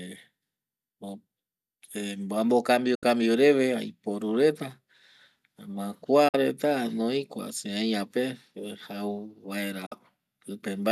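Digital broadcast dropouts occur at 2.95 to 3.03 s, 6.28 to 6.35 s and 9.86 to 9.92 s. The receiver mutes with an 8 ms fade when frames are lost, leaving speech gaps of 72 ms, then 48 ms twice. These fit three and two lost frames.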